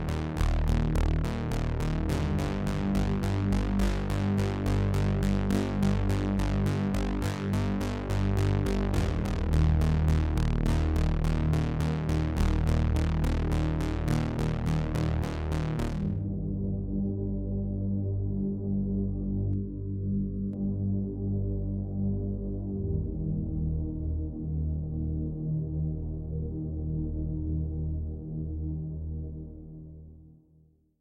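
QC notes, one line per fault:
19.53–20.53 s, channel delay (comb filtering): for this second one channel runs late by somewhere near 0.7 ms, and when the two are summed to mono the shared content cancels at evenly spaced frequencies, the first notch sitting around 700 Hz with further ones near 2.1 kHz and 3.6 kHz. The sound turns hollow and phasey. Unlike a flanger or phaser, the notches stay put rather than sweeping, and the colouring stops abruptly at 20.53 s.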